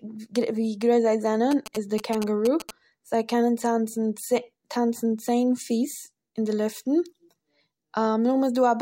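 From 1.51 to 2.71 s, just after "גרויס זיי", a galloping dit-dit-dit of short buzzes cuts across the speech, sitting around 10 dB below it. The buzzes repeat at about 217 Hz. These are GSM signalling bursts: a nearby 2G phone sending brief groups of radio bursts while it signals the network. Something in the audio circuit rectifies that radio energy, turning the burst rhythm into audible buzz.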